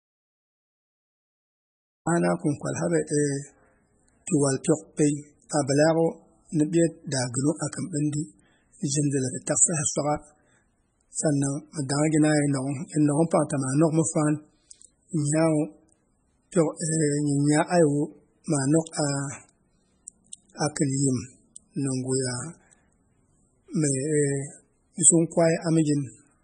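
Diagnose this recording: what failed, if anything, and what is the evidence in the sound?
Audio dropout to silence from 0 to 2.07 s, already under way when the clip begins. The opening is silent with no room tone, and the speech arrives abruptly at "kin kwal", mid-flow rather than from a natural pause. That points to the input stage: the signal was lost, likely through a disconnected device, failed link or accidental mute, while the recorder kept writing silence. Whatever was spoken before 2.07 s is gone.

Low-bitrate audio saved at a high bitrate affects the whole clip at the codec stage. The speech has nothing above 9.4 kHz and carries the smeared, swirly artefacts of heavy MP3 compression, yet the file is large. That combination fits a very low-rate MP3, on the order of 16 kbit/s, likely re-encoded at around 170 kbit/s. The second pass preserved the damage but could not restore the highs or detail the first encoder discarded.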